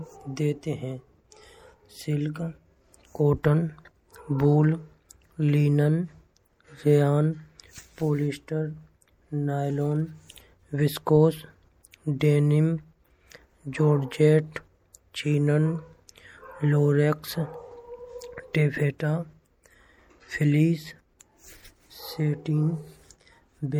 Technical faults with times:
0.00-23.80 MP3 compression

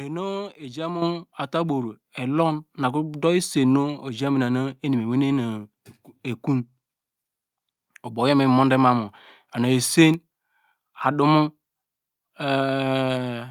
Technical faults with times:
1.02 microphone volume stepped up
2.04 microphone volume stepped up

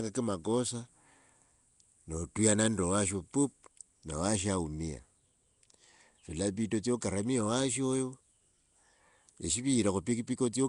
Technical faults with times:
0.00-10.68 Nellymoser compression

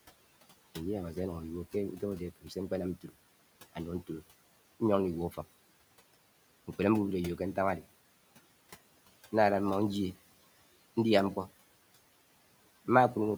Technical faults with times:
0.00-13.38 noise suppressor artifacts
2.36-2.51 speech cut by the noise suppressor

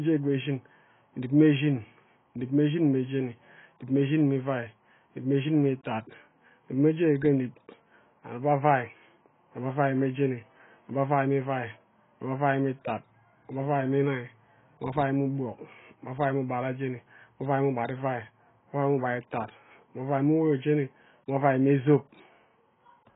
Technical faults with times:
0.00-23.15 AAC compression

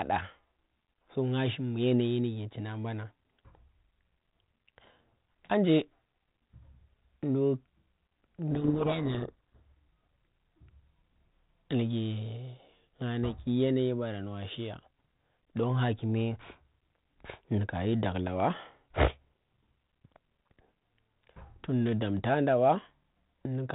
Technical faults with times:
8.51-9.59 codec payload misread

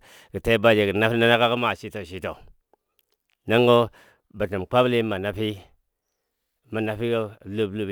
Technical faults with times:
0.00-7.91 sample clock jitter

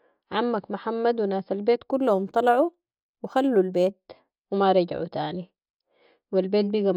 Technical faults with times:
1.90-3.94 imaging from linear upsampling

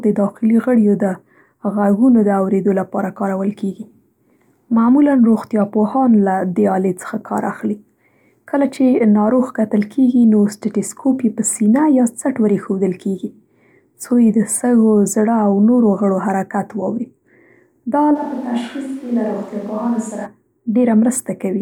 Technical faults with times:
18.17-20.24 switch to a distant microphone

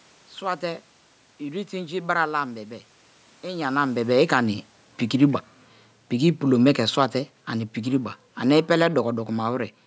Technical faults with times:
7.79-9.64 automatic gain falling

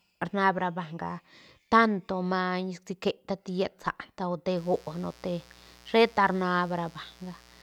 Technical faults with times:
4.57-7.62 mains buzz

